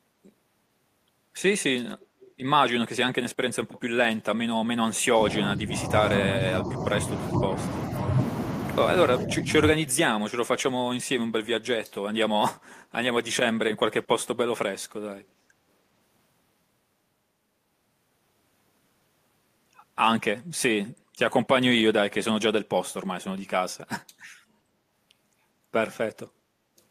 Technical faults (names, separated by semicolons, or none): echo leak; background gated by the echo canceller; speech suppressed in double talk